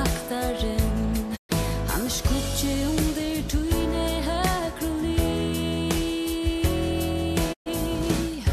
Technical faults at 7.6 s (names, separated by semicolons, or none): digital broadcast dropout